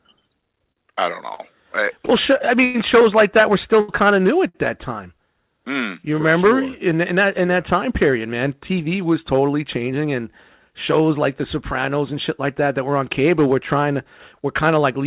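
Repeated stalls (stutter) run from 0.72 to 4.56 s in this speech clip, ending just before "that time mm you". The jitter buffer kept running dry because packets arrived late, so the receiver stretched the last sound across six gaps totalling 334 ms, the longest 104 ms, fading it in the longer waits. Nothing is actually lost, but the speech drags and hiccups. A jitter buffer speed-up follows at 9.76 to 10.06 s, between "man tv was totally" and "and shows like the". Having built up too much audio, the buffer trimmed out pitch-period-sized slices, around 40 ms in all, so the speech runs at 112% speed with unchanged pitch and sounds briefly rushed. The whole clip has no content above 4 kHz, which fits a narrowband G.711 call path.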